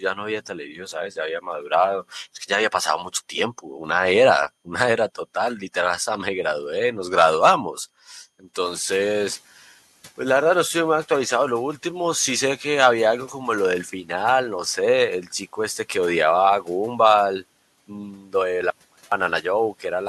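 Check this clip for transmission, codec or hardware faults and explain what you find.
The clip has three kinds of fault: the noise suppressor cuts speech, the suppressor lags after a jump in background noise, and there is one dropout.

Speech cut by the noise suppressor occurs at 0.48–0.94 s, 3.58–3.80 s and 18.11–18.34 s, with drops of about 7, 9 and 13 dB. The suppressor treats brief quiet stretches of speech as noise, so those sounds come out swallowed.

The noise suppressor catches up at 8.6–9.4 s. The room noise rises about 14 dB near 8.5 s, and the suppressor's noise estimate takes 800 ms to adapt. The noise is briefly louder, then sinks by about 6 dB.

An audio dropout to a faint residue runs from 18.70 to 19.12 s, lasting 415 ms. The signal is likely lost upstream while the downstream path stays live. The sound cuts abruptly to a faint trace about 30 dB down.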